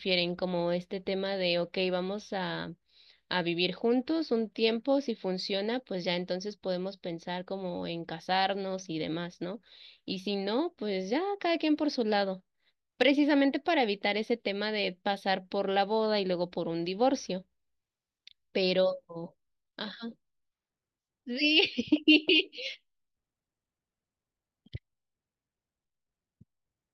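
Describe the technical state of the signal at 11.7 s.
At 11.7 s the speech signal is intact, with no audible fault at that moment.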